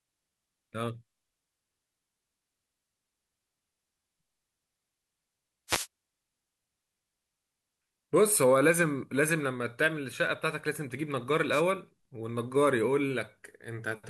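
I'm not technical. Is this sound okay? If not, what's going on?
No. Two wireless microphone noise hits, at 5.68 to 5.87 s and 11.51 to 11.63 s, sound like brief static swishes as the radio signal fades, unlike silent digital dropouts.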